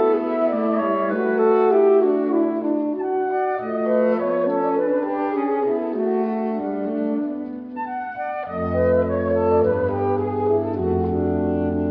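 No technical faults can be heard anywhere in the clip. Nothing in the audio breaks, drops out or changes character at any point.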